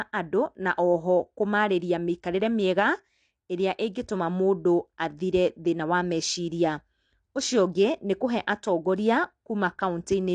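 A speech recording with plainly audible codec damage from start to finish. The spectrum stops dead at about 9.8 kHz, with nothing above it. That missing top end takes the air off the sound. The likely cause is AAC compression, specifically AAC-LC at a low bitrate, which fits roughly 32 kbps. At rates like that the encoder lowers its cut-off. It also spends few bits on the bands it keeps, so they come through coarsely quantised.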